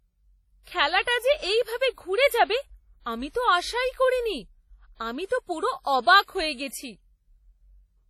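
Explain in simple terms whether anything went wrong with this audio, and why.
Heavy WMA compression likely squeezed this speech throughout, so it sounds ringing and washy, with hiss that swells alongside it and the top end cut off near 16 kHz.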